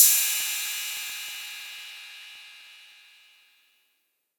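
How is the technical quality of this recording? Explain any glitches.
The recording is marred by a steady rattle of periodic USB or driver dropouts from 0.09 s to 4.31 s. Every 63 ms, about 16 times a second, roughly a millisecond of audio is skipped as a background task stalls the driver or bus, giving around seventy small splices. Each splice makes a tiny tick that sounds only under signal. The rigidly even spacing sets this apart from random clicks or digital clipping.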